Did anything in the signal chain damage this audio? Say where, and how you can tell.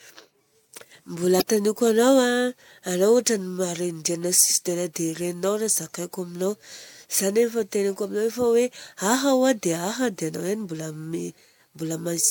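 Yes. Damaged data in a compressed stream, a codec or storage fault, hits at 1.37 to 1.42 s. Corrupted bytes leave the decoder unable to read those frames, so it loses sync and hunts for the next header, and the speech has a brief glitch.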